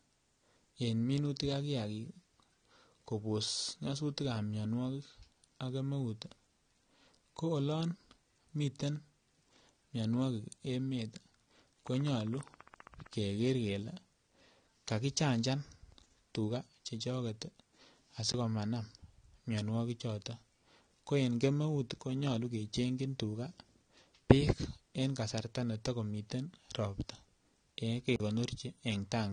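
Throughout, the speech sounds dull and smeared, with nothing above 9.7 kHz and a plainly audible warbling, fizzy texture on sibilants and held sounds. This is likely AAC compression, with AAC-LC quantising coarsely at a rate that fits about 32 kbps.

From 11.87 to 13.14 s, a regular ticking runs over the sound at 15.1 clicks per second, about twenty pulses of similar shape, roughly as loud as the speech. This train of clicks likely comes from interference or a faulty connection injecting repeated pulses.

At 18.32 s the audio drops to a block of digital silence for 20 ms. A second block of 40 ms begins at 28.16 s. Each cuts out and back with no fade, so the first is heard as a short hole and the longer one as a longer hole. This happens when samples are replaced by zeros, typically because an output buffer went unfilled.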